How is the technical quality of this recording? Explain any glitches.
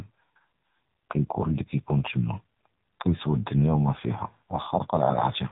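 The recording is heavily degraded by AMR narrowband mobile codec coding across the whole clip. Everything above 4 kHz is gone, and the speech is buzzy and synthetic, consistent with a low AMR-NB mode around 5.9 kbps. The codec rebuilds the voice from a vocal-tract model excited by only a few pulses per 5 ms subframe, so the detail lost at this rate leaves a thin, telephone-band sound with a strong artificial edge.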